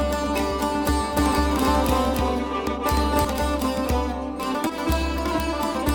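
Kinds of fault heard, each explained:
Doubled audio track: A second, slower capture path or an out-of-step edit likely mixed the music in twice, so from 1.17 to 3.25 s a full-band copy about as loud as the original trails it by roughly 300 ms, starting and stopping abruptly with no decay.
Short concealed packet loss: About 20 ms of the stream reached the decoder too late, and the receiver filled the gap by extending the preceding sound before blending back, leaving a brief smear or wobble in the music at 4.67 to 4.71 s.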